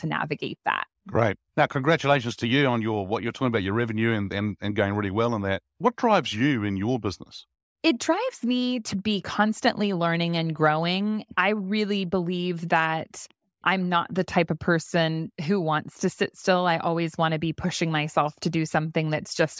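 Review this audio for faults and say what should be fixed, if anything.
Nothing here needs fixing, as no faults turn up anywhere in the recording.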